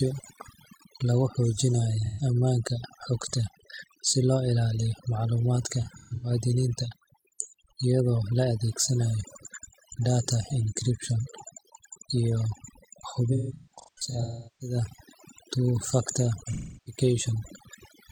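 From the start, the speech carries overdone noise removal. A suppressor set too aggressively cuts individual frequency bands to near nothing wherever they sit close to its noise estimate, and softer parts of the voice go too. The background drops to an unnatural hush dotted with twinkling, chirpy specks. Unlike a low-bitrate codec, the damage follows the noise floor and affects quiet passages most, not louder ones.

AAC frame loss with concealment appears at four points, where the decoder fills gaps by reusing the last good spectrum. At 2.05 to 2.22 s, a 128 ms loss leaves a short smeared, phasey patch. From 5.81 to 6.31 s, about 256 ms is lost in bursts spread over 0.43 s, the longest about 0.15 s, so the sound stutters between smeared and clean stretches. From 13.33 to 14.75 s, about 0.94 s is lost across 1.28 s, and the longest gap, roughly 0.4 s, decays toward silence before fading back in. 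From 16.45 to 17.00 s, a 341 ms loss smears and fades the same way. A plain dropout would cut straight to silence. Here the gaps are filled with a blurred echo of what came just before.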